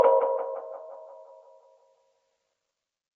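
No technical faults to report in this audio.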